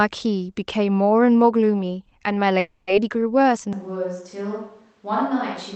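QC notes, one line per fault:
2.59–2.90 s, call audio freeze: the last sound is stretched into a fading buzz or hiss for about 280 ms, with a brief 10 ms dropout, then the audio resumes where it stopped with nothing lost. This likely reflects delayed packets draining the jitter buffer, adding roughly 280 ms of delay.
3.73 s to end, switch to a distant microphone: the sound abruptly turns roomy and hollow, thinner in the bass and about 5 dB quieter, with faint room noise about 35 dB below it. The close microphone likely dropped out, leaving a far one.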